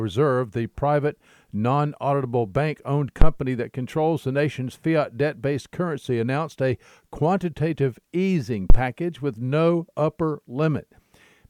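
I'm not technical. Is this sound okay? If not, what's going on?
No. Twice, the microphone's power supply (phantom power) appears to have been switched on or off while recording, a fault called a phantom power thump. The sudden jolt of electricity passes into the sound as a deep thud that hits close to the loudest the recording can hold and dies away quickly. You hear it from 3.22 to 3.33 s, right after "non auditable bank owned", and from 8.70 to 8.78 s, after "announced a quantitative easing".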